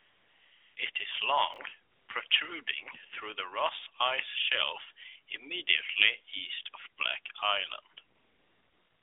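The clip opens with AMR comfort noise from 0 to 0.76 s: the phone sent no speech frames, so you hear a smooth synthetic hiss instead of the real room. It flicks in again at 0.92 s. Between 1.54 and 1.58 s, chunks play out of order: two 20 ms pieces of speech are swapped, giving a tiny jumbled moment. The comfort noise returns from 1.92 to 2.08 s, briefly at 2.28 s, and from 8.16 s to the end, sitting inside the narrowband AMR line.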